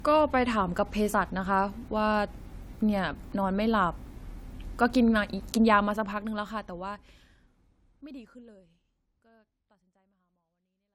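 Throughout the speech, the sound carries the artefacts of lossy coding, yet the spectrum extends to 20.1 kHz, as a 320 kbit/s MP3 would. That mismatch sets it apart from a simple low-bitrate file: this is low-bitrate audio saved at a high bitrate, likely a 64 kbit/s AAC encode re-saved as MP3. The generous second encoding adds nothing audible and cannot restore detail the first one discarded. From about halfway, a smooth fade-out runs cleanly to 10.9 s.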